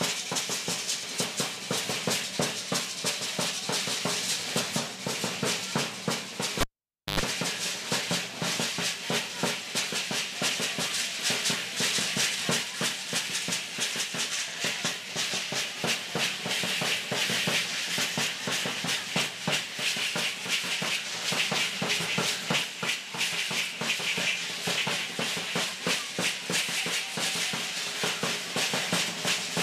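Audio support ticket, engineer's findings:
Cable pulled and plugged in, 6.61 to 7.20 s. The live input connector was disconnected and reseated. There is a pop at 6.61 s, then the signal drops out for 0.54 s. About 0.1 s of 50 Hz mains buzz follows as the tip touches, then a second pop on reconnection.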